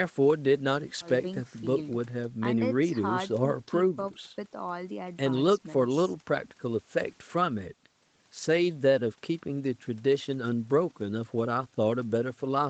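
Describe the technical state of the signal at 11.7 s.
At 11.7 s the speech is intact, with no fault present, only the normal band limit of the call path, which leaves nothing above 8 kHz.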